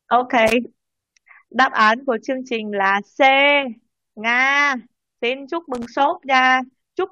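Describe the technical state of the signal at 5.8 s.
Right at 5.8 s there's a burst of loose connector crackle, running from about 5.75 to 5.86 s. A dirty or worn contact is briefly making and breaking, chopping the speech, so you hear a short, ragged scratchy crackle.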